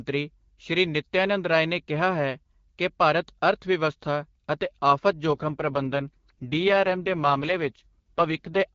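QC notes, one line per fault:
5.26–8.62 s, AMR rate drop: right after "ਭਾਰਤ ਅਰਥਵਿਵਸਥਾ ਅਤੇ ਆਫ਼ਤ" the speech turns rough, raspy and synthetic, with no gap and no narrowing of the band, and stays so almost to the end. The AMR-WB stream, clean with light coding texture at 12.65 kbit/s before this, drops to its lowest rate of 6.6 kbit/s. The codec then has too few bits to model the vocal tract and its pulse excitation accurately.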